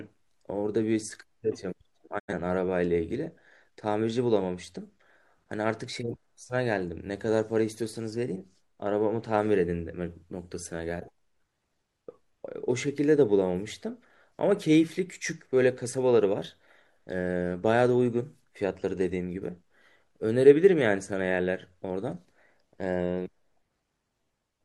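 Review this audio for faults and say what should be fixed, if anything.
A digital broadcast dropout runs from 2.18 to 2.33 s. The speech fades over 20 ms into silence and returns later, losing 85 ms, which fits two failed frames. Unlike packet-loss concealment, nothing is filled in or repeated. Stronger reception or error protection would prevent it.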